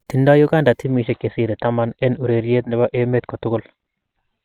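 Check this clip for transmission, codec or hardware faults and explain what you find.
One fault appears, an adaptive stream at a lower bitrate. From 0.84 s to the end, the stream switched to a lower-bitrate version, consistent with roughly 64 dropping to 16 kbit/s. Without any gap, the speech turns dull and smeared, with nothing above 4.5 kHz.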